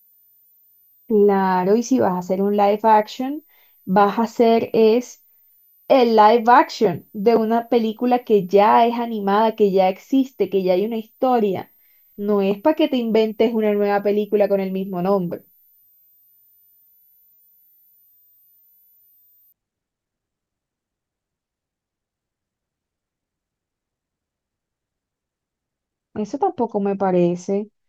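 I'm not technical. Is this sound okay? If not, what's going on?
No. A switching power supply in the recording chain was running in a way that let part of its operation become audible. That puts a faint, very high whistle under the speech, wandering between about 13.6 and 14.1 kHz, from the very start until about 19.5 seconds, when it stops. This is called a switching supply whistle.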